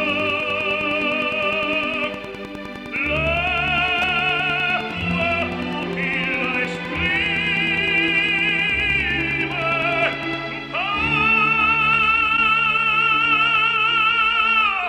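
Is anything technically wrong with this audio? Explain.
Yes, there's Wi-Fi interference from the start to about 10.42 s. A nearby Wi-Fi radio's beacon, sent every 102.4 ms, is being rectified by the audio circuit, so you hear a steady tick roughly ten times a second, sitting around 20 dB under the sound.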